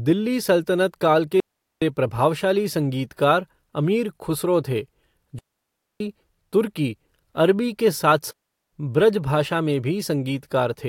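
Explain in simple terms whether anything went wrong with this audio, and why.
The speech cuts out completely three times: from 1.40 to 1.82 s, from 5.39 to 6.00 s, and from 8.31 to 8.73 s. Each gap is a clean, near-silent hole of about 0.4 to 0.6 s, with no crackle or hiss around it. This is a digital wireless dropout. The wireless microphone's radio link lost too much data to rebuild the sound, so the receiver briefly muted instead of playing garbled audio.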